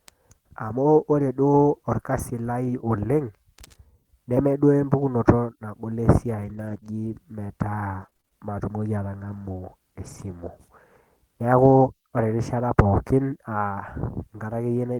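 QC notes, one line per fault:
2.09–2.19 s, lost packet rebuilt from error correction: a 60 ms stretch just before "lai oleng'" plays with no gap but sounds rougher and noisier. This fits about three lost packets replaced by the low-bitrate copies carried in the following packets. On a spectrogram the harmonics there look blurred and grainier, with a faint noise haze between them.
4.97–11.86 s, scattered short gaps: around ten brief holes, the longest roughly 30 ms, are spread across this stretch and end before "ore erishata pookin". Each is patched by continuing the previous sound, which leaves small ticks and smears. The waveform shows short repeated or flattened segments, and the spectrogram shows narrow vertical smudges where harmonics freeze briefly.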